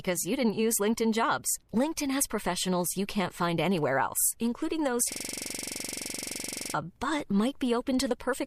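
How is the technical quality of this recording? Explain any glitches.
The recording has one clear glitch: a system hang loop from 5.12 s to 6.74 s, just after "anywhere else including those". A 42.67 ms slice of speech repeats exact-to-the-sample about 38 times, at 23.4 Hz. The machine or driver froze while the audio hardware kept replaying one ring buffer, which fits a 2048-sample buffer. It sounds like a rapid mechanical stutter, and about a second and a half of speech is lost. On a waveform the same short pattern tiles identically across the span. A spectrogram shows evenly spaced vertical striping with frozen, unchanging harmonics.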